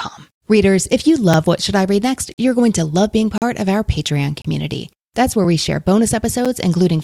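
Around 1.33 s, 2.34–2.38 s, 3.38–3.42 s, 4.42–4.45 s, 5.44 s and 6.45 s, the speech stops in hard-edged silent holes of about 4 to 41 ms: gaps between stream segments, where mistimed 1-second segment joins leave space the player fills with silence. Unlike a dropout, no speech is lost. It resumes exactly where it paused, at steady one-second spacing.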